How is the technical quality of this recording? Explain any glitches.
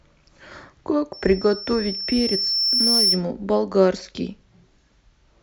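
The recording is marred by one clear fault, a loudspeaker feedback squeal. It runs from 1.13 s to 3.25 s. A microphone is picking up the loudspeaker it feeds. At one frequency the loop gain rises above one, so that tone keeps feeding itself. Here it sits at 5.4 kHz. It swells over roughly two seconds into a thin, piercing whistle. At its peak it stands a little above the speech, by about 5 dB. Then it stops.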